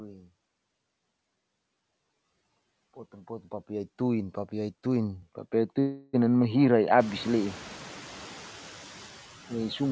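From the start, noise suppressor artifacts run through the whole speech clip. The suppressor judges frame by frame which bands hold steady noise and pulls them down, by about 13 dB here. The noise therefore dips in the gaps and comes back up beneath the speech. Around 7 s the room noise itself rises by about 20 dB, ending about 19 dB under the speech, so this pumping becomes easier to hear.

At 5.22 s the sound abruptly turns duller and boxier, and it stays that way to the end. Throughout the clip nothing reaches above 8 kHz, as a G.722 call path allows. There is no silence at the change and no clear jump in level. A faint new noise floor sits far below the speech. This is most likely an input switched to a poorer device, such as a headset in its call profile.

From 5.80 to 6.15 s comes a call audio freeze. For 334 ms the receiver keeps sounding out the last fragment as a fading buzzy hiss instead of fresh audio. 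There is no true silence. When the held-up packets arrive, the speech resumes exactly where it stopped. Nothing is lost, but everything afterwards runs 334 ms late. The likely cause is packets stalled in transit until the jitter buffer ran dry.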